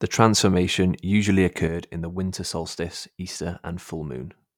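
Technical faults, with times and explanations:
1.67 s to the end: sudden gain jump. Right after "transformation usually" the level drops by about 6 dB in a single step, with no fade, and stays there for the remainder of the clip. The speech and the background noise fall together, so the change lies in the digital gain rather than in the talker. The likely cause is a gain setting or bit shift applied instantly from one sample to the next, without a ramp.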